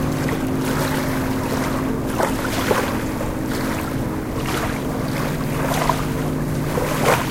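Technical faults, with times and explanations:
No technical faults are audible.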